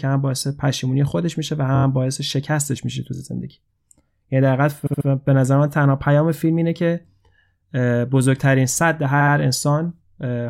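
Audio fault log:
1.74–9.34 s, repeated frames: stutters at 1.74–1.84, 3.14–3.21, 4.86–5.06 and 9.20–9.34 s. A block of 23.2 ms in the first two and 69.7 ms in the last two plays two to four extra times. This fits one or three compressed frames decoded again. Each stutter lengthens the audio, by up to 209 ms.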